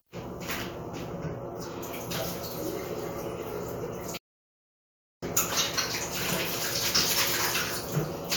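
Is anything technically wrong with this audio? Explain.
Yes. A playback stall runs from 4.17 to 5.23 s: the sound cuts off mid-flow, stays silent for about 1.05 s, then resumes. The likely cause is the player starving for data or its thread blocking. Waveform and spectrogram show a flat, empty gap with abrupt edges.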